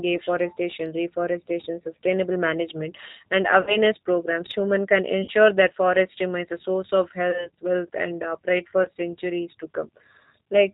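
The whole thing runs through a G.729 codec, which fits the 8 kbit/s G.729A flavour. It rebuilds the voice from a vocal tract filter plus a pitch predictor and four pulses per half frame, with nothing above 4 kHz, so the speech sounds plainly rough, band-limited and a bit synthetic.

Then there's VoIP packet loss concealed by the speech codec, twice. Right after "reforestation sustainable management and", from 3.61 to 3.77 s, about 60 ms of audio went missing. The decoder stretched its last pitch and filter into a fading buzzy tone or coloured noise, and the voice stays weak for a beat after. A shorter hole, about 40 ms, hits from 5.24 to 5.32 s, just before "that forest remains a", with the same smeared, fading dip.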